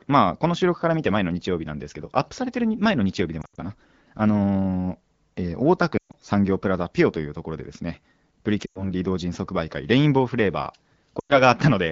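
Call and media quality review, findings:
Lost AMR speech frames at 3.41–3.60 s, 5.98–6.15 s, 8.65–8.89 s and 11.19–11.41 s: speech drops to near silence; decoder concealing corrupted frames with decaying gain. Wideband codec at 12.65 kbit/s, light coding damage only.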